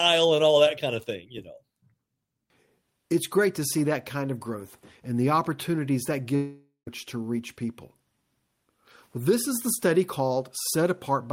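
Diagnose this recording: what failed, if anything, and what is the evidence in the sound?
At 6.35 s the speech stops progressing and its last sound is stretched into a buzzy tail that fades to near silence before speech resumes at 6.89 s, with about half a second of material simply gone. The stage is the network, most likely a long network dropout: the receiver's concealment kept extrapolating the final sound, then gave up and went quiet. Unlike a brief packet-loss glitch, the gap is long enough to fade out, and the audio returns later rather than picking up where it stopped.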